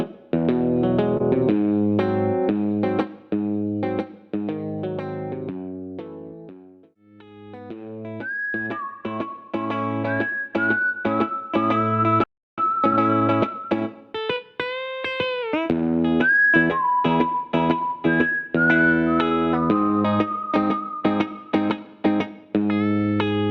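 At 1.17 to 1.21 s there is a brief smear and wobble, where a sliver of sound blurs rather than cuts out. This is short concealed packet loss: about 20 ms of audio arrived too late, and the decoder covered the gap by extending the preceding sound before blending back into the real signal.

At 12.24 s the audio simply stops in mid-flow and stays silent for about 0.34 s, resuming at 12.58 s. This is a playback stall, most likely because the player's buffer ran dry or its output thread was held up.

From 12.58 to 14.84 s the audio sounds hurried, running about 1.15 times faster while keeping its normal pitch. This is time-compressed catch-up: the player trims small pieces and cross-fades the joins to work off the backlog left by the stall.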